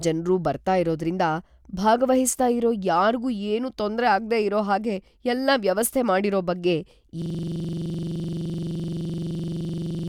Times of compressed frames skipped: none

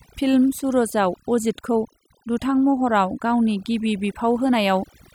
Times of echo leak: none

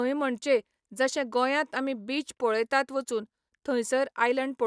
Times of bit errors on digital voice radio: none

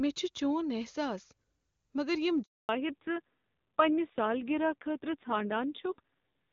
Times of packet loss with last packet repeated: none

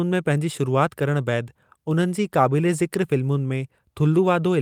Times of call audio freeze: none

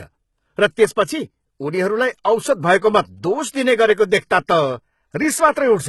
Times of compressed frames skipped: none

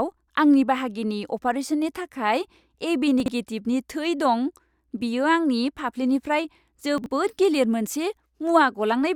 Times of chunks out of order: 3.20-3.28, 6.98-7.06

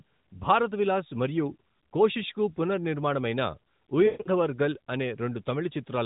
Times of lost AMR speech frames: 4.06-4.29

